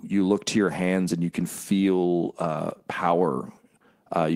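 Lost packets rebuilt from error correction occur at 1.39 to 1.45 s, between "your hands and you" and "feel uh", and at 2.69 to 2.71 s, after "feel uh". The missing audio was filled from low-bitrate copies carried in the following packets, so nothing drops out, but about 40 ms (fitting two 20 ms packets) and then 20 ms sound briefly rougher and noisier.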